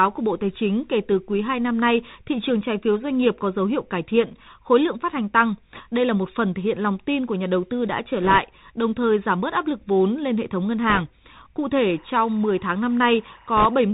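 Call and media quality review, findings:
Bluetooth CVSD headset codec, whole clip: nothing above 4 kHz, scratchy s sounds, granular hiss under speech. Fits a 64 kbit/s CVSD link. Constant, unlike the timed crackle bursts.

Bit errors on a Bluetooth voice link: rushing crackle at 5.74–5.81 s after "lượng phát hành tăng", 8.22–8.38 s between "đầu tư đã trở" and "đồng thời giảm bớt", 10.90–11.01 s after "hệ thống ngân", and 13.57–13.66 s. Error rate around 1.5 to 3 percent. Scales with speech level, with no lone sharp clicks as in dropouts.

Timecode bleed, 11.83–13.83 s: chirping warble alternating between about 1 kHz and 2 kHz, about 30 dB below the speech, fitting 24 frames/s code. The octave switching sets it apart from steady hum or a single-tone whistle.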